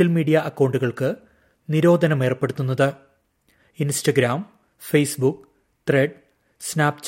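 Nothing technically wrong can be heard anywhere in the audio. No faults turn up at any point, so there are no times or causes to give.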